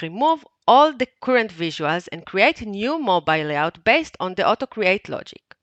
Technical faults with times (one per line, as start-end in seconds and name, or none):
none